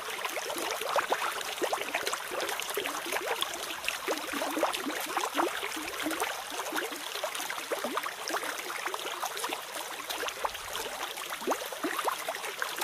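No technical faults can be heard anywhere in the sound.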